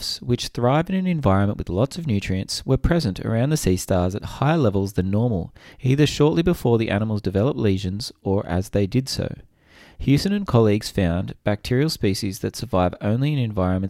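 No audible technical faults turn up anywhere in this recording.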